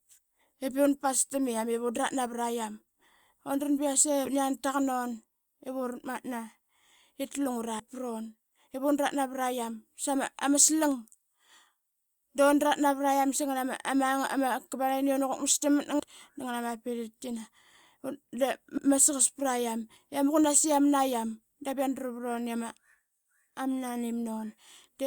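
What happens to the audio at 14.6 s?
Nothing goes wrong at 14.6 s; the speech carries on intact through that moment.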